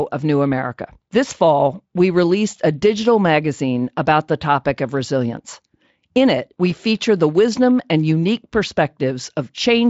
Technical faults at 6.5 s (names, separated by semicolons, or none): none